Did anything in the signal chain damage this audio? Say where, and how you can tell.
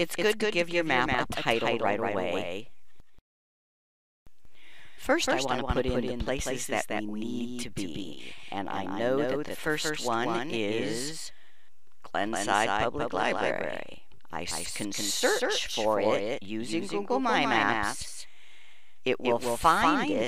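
Yes. A doubled audio track runs through the whole clip. A second, full-band copy trails the original by roughly 200 ms at about 5 dB lower, with no decay or room colour. That points to the same signal likely being captured twice, once through a slower path.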